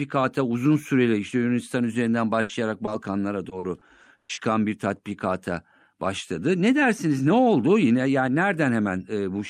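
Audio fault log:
2.41–2.51 s, burst of packet loss: about 80 ms concealed by extending the last sound and fading it, then skipping ahead; spectrogram shows smeared, decaying energy before an abrupt restart.
2.85 s, short concealed packet loss: a 20 ms hole patched from the preceding sound, heard as a brief smear; waveform shows a tiny patched stretch blended back in.
3.49–4.39 s, repeated packet loss (robotic sound): six gaps, longest 120 ms, about 29% of the stretch concealed, giving choppy sound; spectrogram shows repeated frozen, banded patches.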